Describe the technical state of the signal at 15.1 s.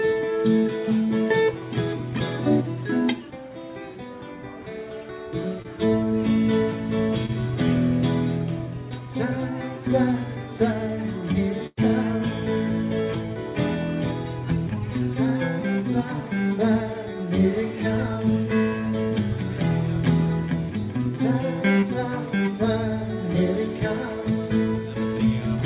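At 15.1 s the audio is intact, with no fault present, and the band-limited sound of the call path, with nothing above 4 kHz, is as expected for that route.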